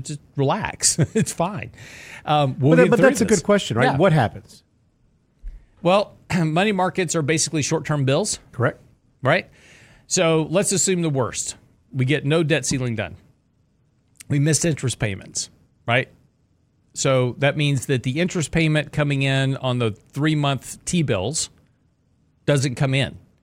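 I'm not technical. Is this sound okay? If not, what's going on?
Yes, it's fine: nothing in this recording sounds broken or glitchy, so you can relax.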